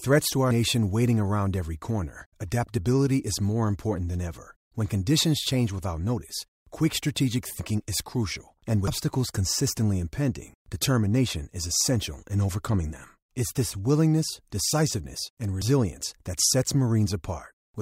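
At 8.88 s the speech jumps abruptly, about a third of a second missing; at 15.62 s a shorter skip of roughly a tenth of a second. Both likely come from a dropped buffer (overrun), and show as a hard waveform discontinuity and a spectrogram seam.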